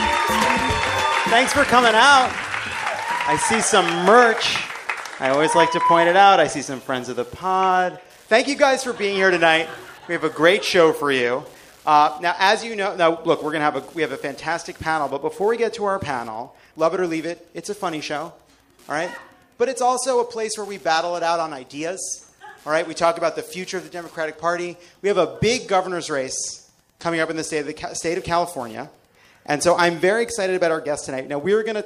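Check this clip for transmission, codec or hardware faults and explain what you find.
One hardware fault runs through the whole clip. Wi-Fi interference, present from start to end: a Wi-Fi radio close to the audio circuitry transmits its beacon every 102.4 ms, and the circuit rectifies each burst into the audio path. The result is a steady ticking just under ten times a second, sitting roughly 35 dB below the sound.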